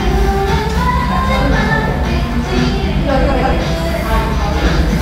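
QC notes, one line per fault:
3.31–3.53 s, frames out of order: a garbled flutter; two adjacent blocks of about 105 ms each, consistent with four-frame runs, play swapped, losing no time.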